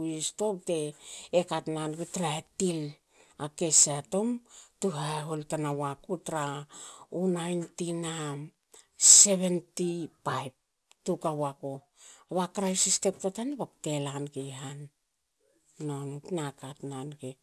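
Aliasing runs throughout the speech: the audio was downsampled without an anti-alias filter, which fits a drop from 44.1 kHz to 24 kHz. Energy above 12 kHz folds back as gritty, metallic sibilants, about 20 dB down, with a spectrogram showing mirrored energy pressed hard against the 12 kHz edge.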